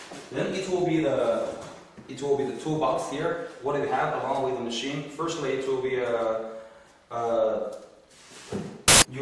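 At 8.88 s the sound gives way to a burst of very loud white noise. It stops abruptly at 9.02 s, so it lasts about 140 ms. Both edges are hard, with no fade in or out. This is file tags played as audio. A block of compressed data, here an embedded cover picture, was read as if it were samples. Compressed bytes look random, so they play back as static across the whole spectrum.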